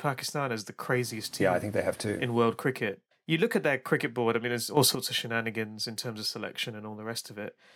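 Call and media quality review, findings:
Sudden gain jump, 4.77 to 4.95 s, right after "board I mean there's": speech and background noise leap up together by about 8 dB, then settle back before "of shenanigans in terms". Likely a gain setting or bit shift applied instantly, no ramp.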